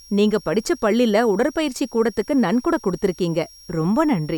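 A switching power supply whistle runs throughout: the supply is cycling audibly, laying a faint high tone drifting between 5.54 and 5.69 kHz, roughly 25 dB under the speech.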